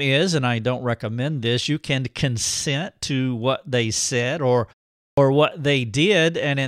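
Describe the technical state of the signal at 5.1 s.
At 5.13 s the speech resumes with a clipped start after a pause. Following a silence of 0.48 s, the output path has gone idle and needs a moment to wake, so the first 44 ms of sound, up to 5.17 s, never reaches the output. The word therefore bursts in abruptly, missing its first sounds. Muted pauses only silence the gap and return in time for the next sound, but here the onset itself is lost.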